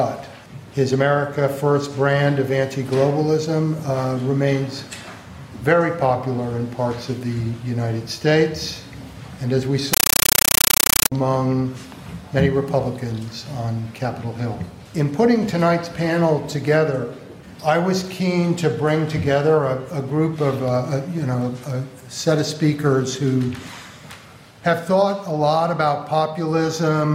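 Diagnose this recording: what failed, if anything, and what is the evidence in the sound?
At the playback link, 9.93 to 11.12 s turns into very loud, chattering static: a compressed stream played as audio. The waveform shows 9.3 ms noise bursts, then flat zero padding, 31.25 times a second, fitting undecoded AC-3 frames. The spectrogram shows broadband vertical stripes.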